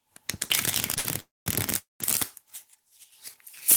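At 0.98 s a late packet left the jitter buffer briefly empty, causing a short stall from a late packet: the last sound is held for about 61 ms with a faint buzz, then resumes where it stopped.

Two call audio freezes follow, likely from packets held up in transit. From 1.20 to 1.48 s the sound decays into a fading buzz and then about 200 ms of silence. From 1.78 to 2.02 s the same happens, with about 160 ms of silence. Each time the audio picks up where it left off, so nothing is lost but a gap is added.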